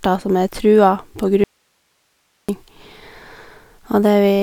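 At 1.44 s the speech cuts out abruptly for about 1.05 s, until 2.49 s, leaving only faint hiss roughly 50 dB below the signal. This is an audio dropout to a faint residue, likely a lost signal feed with the downstream path still live. The hard edges separate it from a natural pause or fade.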